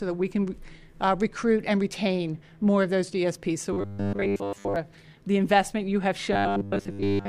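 From 3.73 to 4.76 s the sound turns robotic. A rigid, metallic buzz sits at 100 Hz and still loosely tracks the audio underneath. The same fault returns at 6.33 s and runs to the end at 7.29 s. This is likely robotic sound from repeated short buffers. New audio arrives too slowly, so a 10 ms slice keeps repeating. Most of the real audio is skipped. That repeat rate sets the fixed 100 Hz pitch.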